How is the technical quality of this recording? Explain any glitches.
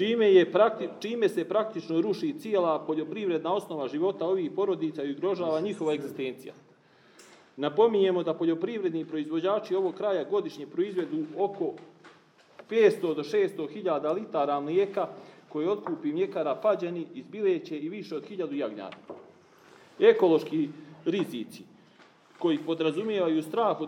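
No glitches or technical faults can be heard here.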